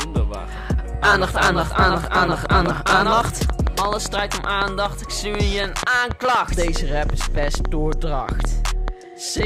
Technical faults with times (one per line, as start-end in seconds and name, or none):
2.04-9.44 train of clicks